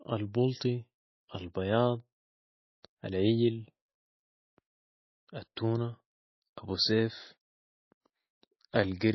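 Throughout the speech, everything above 5.8 kHz is missing and weak detail swirls watery. Likely MP3 compression at a low bitrate, which fits about 24 kbps.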